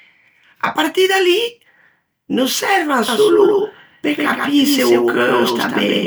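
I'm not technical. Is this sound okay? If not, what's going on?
No. From 3.08 seconds to the end, the speech was likely picked up twice, once through a slower route, giving a doubled audio track: a noticeably quieter copy trails the original by about 0.15 seconds, so everything sounds echoed and smeared.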